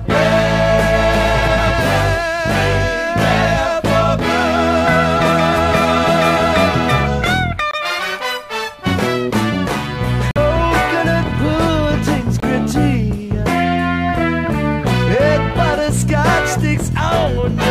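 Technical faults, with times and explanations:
7.71–7.75 s, 10.31–10.38 s and 12.40–12.44 s, corrupt frame muted: Damaged compressed frames failed to decode, and the player filled each gap with silence instead of stalling. The sound cuts out abruptly for about 42 ms, 65 ms and 38 ms respectively, and each dropout fits roughly two frames lost together. Playback resumes on schedule after each hole, with no drift or shift in timing.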